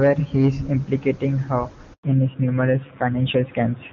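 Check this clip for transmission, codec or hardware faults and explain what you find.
Two faults appear, both around a network change partway through the speech.

Handover gap, 1.93 to 2.03 s, right after "he is implicating her": during the network switch no speech frames arrived, so the sound drops to silence for 100 ms.

Fallback to narrowband, 2.03 s to the end: the call left the clear-sounding HD Voice (AMR-WB) link for a narrowband AMR-NB codec. Nothing above 4 kHz survives, so the speech turns duller and rougher.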